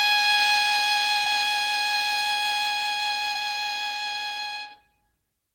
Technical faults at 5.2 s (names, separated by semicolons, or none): none